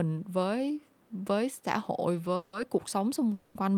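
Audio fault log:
2.36 to 2.55 s and 3.34 to 3.57 s, call audio freeze: the sound stalls and the last moment is drawn out as a fading buzz or hiss for 170 ms, then 210 ms, without reaching silence. The likely cause is packets held up in transit, leaving the jitter buffer empty while the receiver improvised a continuation. When the packets arrived, the audio resumed exactly where it stopped, so nothing is lost, but everything after each gap runs later by that amount.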